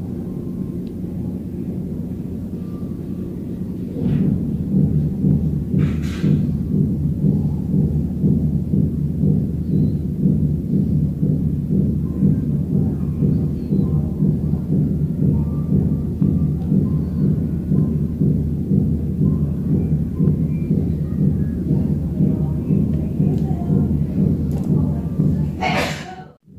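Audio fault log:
5.31, 16.22, 17.79 and 20.28 s, hard clipping: at each of these instants a peak of the signal ran past the largest value a stage in the chain could pass, by no more than about 1 dB, and the waveform was sliced flat at that ceiling. The sharp corners of the flattened tops throw energy into high harmonics, so each peak carries a brief crackle or tick rather than a sustained fuzz, because the overload is slight and momentary.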